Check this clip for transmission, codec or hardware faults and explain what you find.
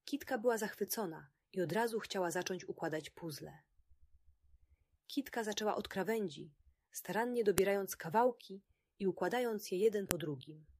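Two sharp clicks are heard, at 7.58 s and 10.11 s. Both are a file header played as audio. Separate WAV pieces were joined without stripping their headers. Those header bytes play as samples, giving a loud, abrupt snap where each piece begins.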